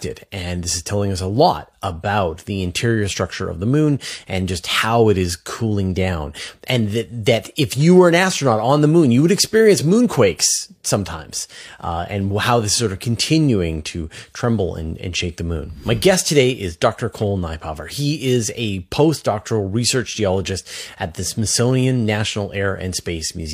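The clip shows no technical faults at all, so there's nothing here to point to.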